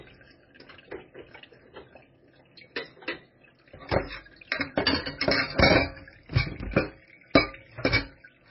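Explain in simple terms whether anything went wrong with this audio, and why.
Heavy MP3 compression affects the whole clip, from start to finish. Nothing is heard above about 5.6 kHz, so the top end is missing and everything sounds dull and boxed-in. The quieter details have a watery, swirling quality as they flicker in and out. The likely cause is an MP3 encoder given too little data to work with: it discarded the treble entirely and dropped faint parts of the sound, keeping them in some moments and losing them in others.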